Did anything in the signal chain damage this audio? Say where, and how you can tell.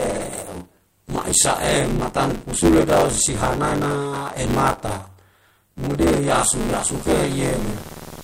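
Yes. Buffer tearing runs throughout, at the driver or buffer stage: a robotic 93.8 Hz rattle over the speech, which fits a 512-sample buffer, replaces a large part of each period with audio from about 20 ms earlier.

Video or display buzz enters the analogue wiring from 6.86 s to the end: a 75 Hz buzz with hash, at roughly 15 dB below the speech, picked up from a screen's field rate.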